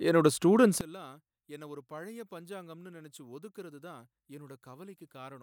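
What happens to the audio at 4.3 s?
One channel inverted, from 0.81 s to the end of the clip at about 5.42 s, is what is heard at 4.3 s. The speech drops by about 22 dB and turns faint and distant, as though most of its body has been cancelled. The likely cause is a polarity flip on one stereo channel: when the two channels are summed to mono, everything they share cancels, leaving only their small difference as a faint residue of the speech.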